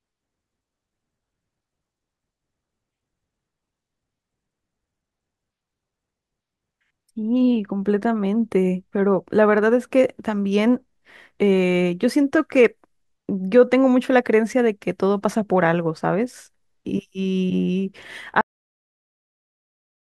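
Speech that suffers a cut-off end at 18.41 s: the final buffers never played, so sound stops mid-utterance into instant digital silence, with no decaying tail as a fade-out would leave.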